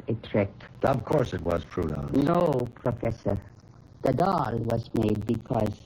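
From the start, the channels are drifting apart: the two sides run on clocks about 70 ppm off, so the delay creeps to roughly a third of a millisecond and a slow flanging sweeps through. From 0.68 s to 5.80 s come periodic USB or driver dropouts, a gap of silence around 10 ms long every 0.064 s, roughly seventy in all, heard as a steady ticking over the sound.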